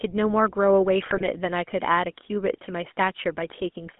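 From start to end the speech carries the buzzy, gravelly roughness of the GSM full-rate codec, consistent with the 13 kbit/s original GSM coder. Band-limited telephone filtering would only muffle the sound, but this coder rebuilds the voice from a vocal-tract model driven by sparse, regularly spaced pulses, which produces the grit. Everything is confined to roughly 200 Hz to 3.4 kHz.

Between 1.02 and 1.27 s, GSM bit errors break through. Corrupted filter, pitch and gain parameters reach the decoder, so the voice turns to squawks, pops and gargling, with level jumps. That stretch is about a quarter-second long, which fits around eleven damaged 20 ms frames and an error rate near 2%. Packet loss would leave gaps or smooth concealment instead of these distorted bursts.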